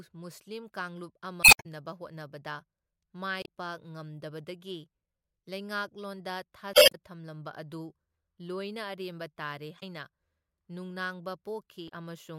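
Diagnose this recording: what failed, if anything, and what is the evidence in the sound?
Five short glitches break into the speech: 1.41 to 1.66 s (right after "ꯃꯨꯁꯂꯤꯝ ꯀꯥꯡꯂꯨꯞ"), 3.42 to 3.47 s, 6.71 to 6.95 s, 9.77 to 9.83 s and 11.85 to 11.90 s. This is damaged data in a compressed stream, a failure at the codec stage. At each point corrupted bytes in the compressed file make the decoder misread frames. It loses sync and searches for the next valid frame header.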